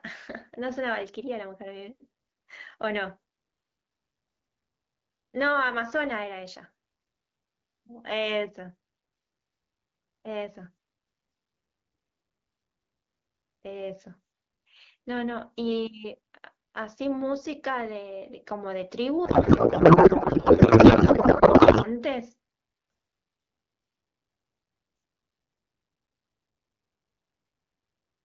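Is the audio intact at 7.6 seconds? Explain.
Yes, at 7.6 seconds the speech is intact, with no dropout, distortion or other fault at that moment.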